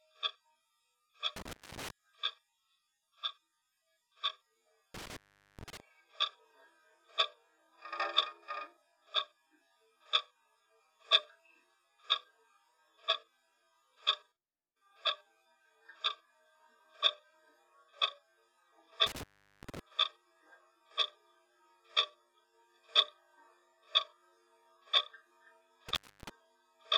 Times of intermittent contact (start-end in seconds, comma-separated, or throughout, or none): 1.36-1.90, 4.94-5.80, 19.07-19.79, 25.89-26.29